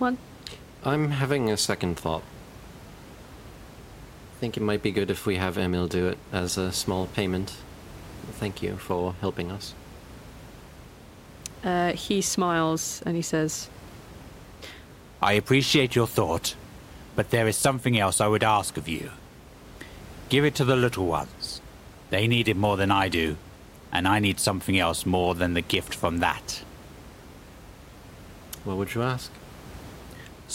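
No technical faults can be heard in this recording.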